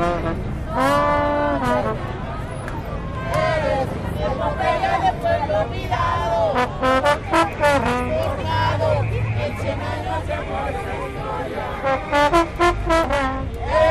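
No technical fault can be heard anywhere in this recording of sounds; the signal stays intact and continuous throughout.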